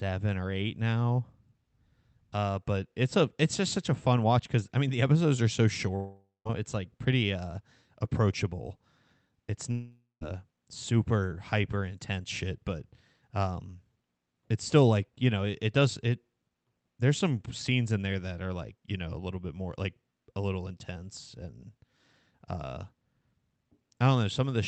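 At 5.95 to 6.47 s, after "the episodes are so", and 9.71 to 10.23 s, before "super hyper intense shit", about half a second of sound is lost, likely a long network dropout: the receiver extends the last sound as a fading buzz, then roughly 0.17 s of silence before audio resumes.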